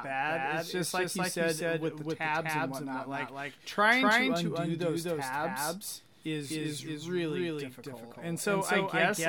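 Throughout the recording, a second copy of the same speech signal is likely being mixed in, picked up again through a slower path or held out of step by an edit. That doubled audio track trails the original by roughly a third of a second at about the same level. Every syllable is answered by a full-band echo with no decay or room colour, which makes the speech sound smeared and cluttered.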